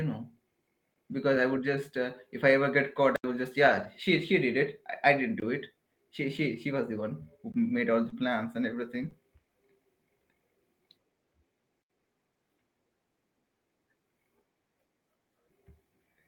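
A block of digital silence at 0.94 s cuts this speech out for 20 ms and back with no fade. The likely cause is an output buffer that was not filled in time.

A lost packet rebuilt from error correction follows at 1.67 s. The decoder played a low-bitrate backup copy carried in the next packet, so there is no gap, but those 20 ms sound rougher and noisier.

At 3.16 to 3.24 s a longer 80 ms silent block is heard as a short hole.

From 3.67 to 3.85 s about 100 ms of rebuilt audio, which fits five separate 20 ms frames, runs coarse and grainy.

Further 20 ms silent blocks at 5.40 s and 7.52 s each cut the sound out and back.

At 6.37 s there is another rebuilt 20 ms stretch.

Short concealed packet loss at 8.09 to 8.14 s overlaps a rebuilt frame at 8.12 s. Here the receiver stretched the last sound to cover a missing 20 ms, then blended back, so it comes across as a brief smear.

Rebuilt audio at 9.02 to 9.08 s is followed by a second concealment at 9.10 to 9.14 s, which sounds like a quick wobble.

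A final 80 ms silent block at 11.82 to 11.90 s punches a hole in the audio.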